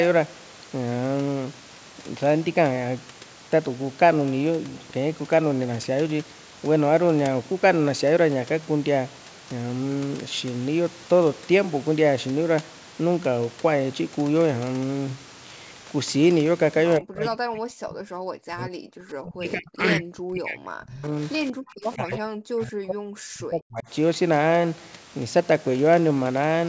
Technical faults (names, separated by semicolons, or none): speech suppressed in double talk